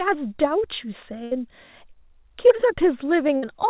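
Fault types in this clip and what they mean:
Burst of packet loss: A run of audio failed to arrive in time, and the receiver stretched the last sound to cover it while fading it down. Here it happens at 1.24 to 1.33 s and again at 3.37 to 3.44 s, each about 60 to 80 ms of real audio gone. On a spectrogram it shows as a held, smoothly decaying copy of the preceding frame. In the waveform it appears as a shrinking continuation of the last sound before the signal resumes abruptly further on.
Short concealed packet loss: Around 3.27 to 3.30 s, roughly 20 ms of audio went missing. The receiver patched the hole by extrapolating the last sound and blending back into the real signal, which is heard as a brief smear or wobble. On a spectrogram it looks like a thin vertical band of slightly blurred, repeated texture within the 4 kHz-limited telephone band. The waveform shows the continued last sound at the join.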